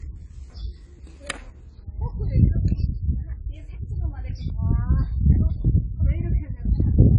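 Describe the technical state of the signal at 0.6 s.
At 0.6 s the audio jumps abruptly: chunks out of order between 0.5 and 1.5 s, where one 500 ms chunk plays a chunk late.

Dull, smeared, fizzy, with nothing above 10.2 kHz: likely AAC compression, with damage pointing to a low bitrate of around 24 kbps.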